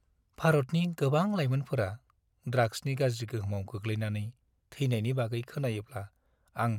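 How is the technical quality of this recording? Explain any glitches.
Nothing in the recording stood out as a glitch or technical problem on listening.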